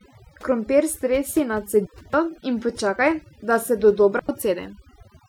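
Across the whole speech clip, overdone noise removal is at work. The reduction was pushed so hard that individual frequency bands are pulled down or shut off whenever they sit near the tool's noise estimate, taking quieter parts of the voice with them. The background falls to near silence sprinkled with twinkling specks. These artefacts track the noise floor and the voice's quiet detail rather than appearing as even smearing across loud passages, which separates them from a low-bitrate codec.

At 1.86 s, right after "stresi na", a digital wireless dropout mutes the sound for 280 ms until 2.14 s, with the speech resuming on "in počakaj da se". A second, shorter one follows at 4.19 s, just after "in počakaj da se", lasting 96 ms until 4.29 s. In each case the receiver lost too much data and muted with a very short fade, leaving a clean hole of near silence. No hiss or crackle comes before or after either gap, which rules out an analogue radio dropout.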